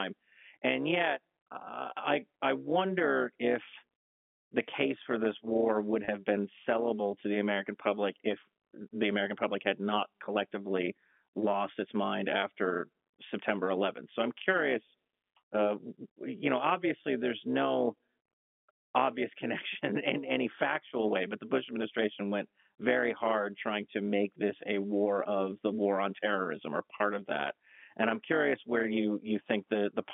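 Telephone-band speech runs through this recording, its narrow 200 Hz to 3.4 kHz range typical of G.711 coding, and it carries an overlap-add ripple from start to finish. The level pumps by about 11 dB at a rate of around 200 Hz, giving the speech a metallic buzz with extra tones around each note. It sounds this way because the audio was split into windowed frames and rejoined with an overlap whose gains don't add up to a constant, so the level dips and swells once per frame. A waveform shows a dense, regular scalloping of the envelope, and a spectrogram shows sidebands spaced about 200 Hz either side of the harmonics. There are also two brief events of packet loss with pitch repetition, both heard as a momentary held, buzzy tone. The first runs from 6.05 to 6.08 s, after "for this war would" and before "been sellable to the". It lasts 30 ms, which fits three 10 ms packets. The second runs from 26.98 to 27.00 s, after "war on terrorism or" and before "of that". 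It lasts 20 ms, pointing to two packets. In each case the receiver filled the gap by repeating the last pitch period. On a spectrogram these spots show frozen, perfectly steady harmonics, and the waveform shows repeated cycles of the same shape.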